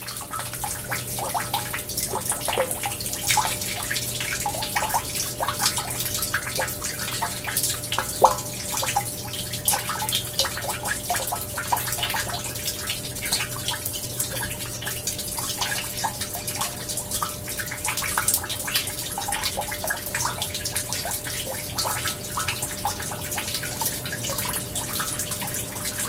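An everyday sound recording. From 12.88 to 16.19 s, a call bitrate drop makes it coarse and duller. That fits the encoder falling from about 32 to 17 kbps.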